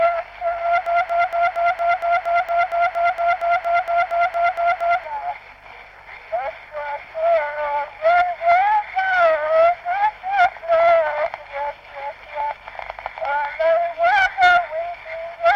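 From 0.86 s to 5.04 s a broken-record loop takes over: the same 232 ms fragment repeats exactly, back to back, eighteen times, and whatever should have played there is lost. Unlike an echo, nothing decays or overlaps. The likely cause is a stalled player or stream resending its last held piece.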